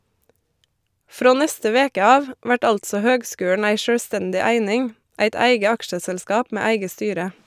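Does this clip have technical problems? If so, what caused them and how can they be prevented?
No, no technical problems heard.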